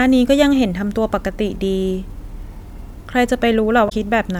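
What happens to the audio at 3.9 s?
Damaged data in the compressed stream from 3.85 to 3.92 s: corrupted frames make the decoder lose sync and hunt for the next header, giving a brief chirp, squawk, click or short hole.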